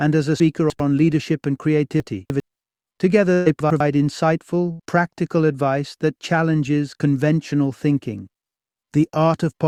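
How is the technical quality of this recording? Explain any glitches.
The recording has two recurring transport faults: chunks out of order three times and a burst of packet loss twice.

Chunks out of order occur at 0.4 to 0.8 s, 2.0 to 2.4 s and 3.6 to 3.8 s. In 100 ms blocks, one chunk was delivered late and played after three chunks that should have followed it, or after one chunk in the last case. Nothing is dropped, but the sequence scrambles briefly.

A burst of packet loss occurs at 3.33 to 3.48 s and 4.72 to 4.81 s. About 120 ms and then 80 ms of audio never arrived in time. The receiver filled each gap by extending the preceding sound while fading it down. The result is a brief held, decaying tail, after which playback jumps ahead past the missing section.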